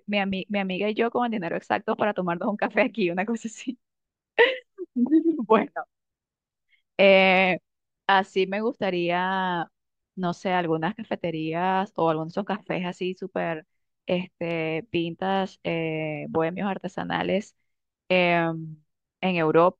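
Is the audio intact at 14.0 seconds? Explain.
Yes, the audio is intact at 14.0 seconds, with no fault present at that moment.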